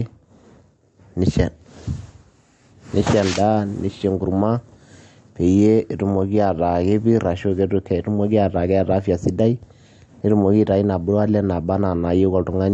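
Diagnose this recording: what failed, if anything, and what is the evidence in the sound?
Throughout the speech the sound is watery and swirly, with plainly audible damage: nothing is present above 11 kHz, and sibilants come through smeared and metallic. The fault sits at the codec stage, likely MP3 compression at a low bitrate, around 48 kbps. Starved of bits, the encoder cut the treble at a fixed point and dropped weak frequency lines that flicker on and off between frames.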